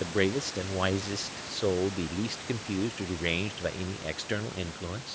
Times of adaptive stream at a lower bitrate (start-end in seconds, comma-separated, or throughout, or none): none